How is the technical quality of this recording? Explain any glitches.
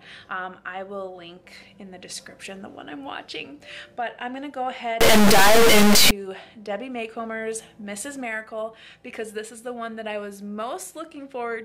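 There's one real glitch here. From 5.01 to 6.11 s you get an integer read as float fault: the raw sample bits get misread, so values slam between silence and full-scale clipping. That makes a harsh, very loud buzzing square wave, consistent with 32-bit integer data being read as 32-bit float.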